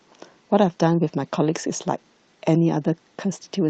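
No technical faults can be heard in this speech recording. It has passed through a call path whose codec rolls off the highs above about 8 kHz, which fits Opus at around 40 kbps.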